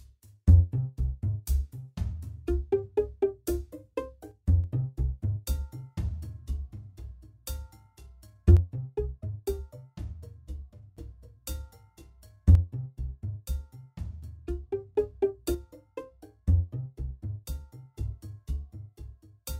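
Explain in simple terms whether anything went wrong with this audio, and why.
One channel drops out at 4.31–4.64, 8.57–10.97, 12.55–14.95 and 15.55–17.95 s. The sound suddenly drops to about half its level, likely because one stereo side went silent.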